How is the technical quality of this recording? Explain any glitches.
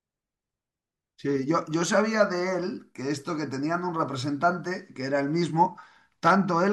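No glitches can be heard anywhere in this speech recording. There is nothing in it that calls for an explanation.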